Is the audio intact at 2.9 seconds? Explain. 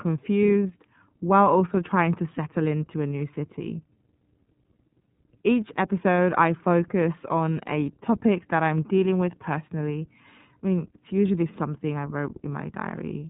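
No. At 2.9 s the speech carries iLBC codec damage, which runs through the whole clip. The codec encodes each 30 ms frame's excitation independently of the previous frame, so the signal is rebuilt from a coarse model rather than the original waveform. The result is plainly audible: a rough, slightly synthetic texture, with nothing above about 3.8 kHz, giving a narrowband telephone sound consistent with the 13.33 kbps iLBC mode.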